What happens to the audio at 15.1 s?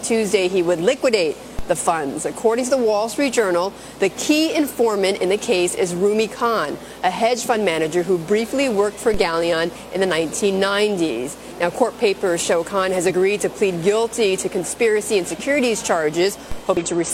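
At 15.1 s the audio carries on cleanly, with no dropout, click, glitch or other disturbance.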